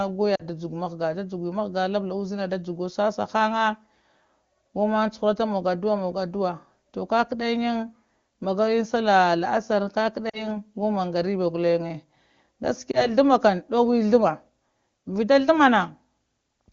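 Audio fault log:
0.35–0.42 s, 10.29–10.56 s and 12.91–13.09 s: lost AMR speech frames. The single lost frame sounds like a brief dip or warble and the two-frame runs drop to near silence, which fits two, two and one missing 20 ms frames. The decoder repeated its last pitch and vocal tract settings at falling gain.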